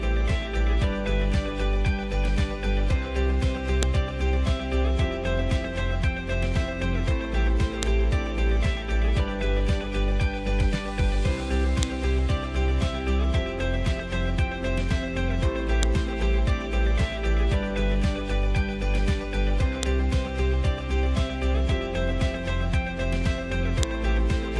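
Sharp, loud clicks snap through at 3.83, 7.83, 11.83, 15.83, 19.83 and 23.83 s. This is a file header played as audio: each 4-second piece kept its header bytes.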